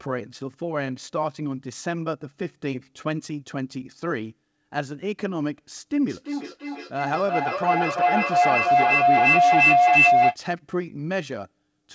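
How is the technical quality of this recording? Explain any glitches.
The recording has one clear fault, a feedback howl, heard over a call path whose audio stops at 8 kHz, which fits G.722 at 64 kbps.

From 6.09 to 10.4 s, a feedback howl builds around 700 Hz, with the loop repeating roughly every third of a second, and peaks about 9 dB above the speech. Two devices in the same room were looping microphone to loudspeaker with net gain, so each pass grew louder. Unlike an echo, whose repeats fade, this one swells into a single sustained tone.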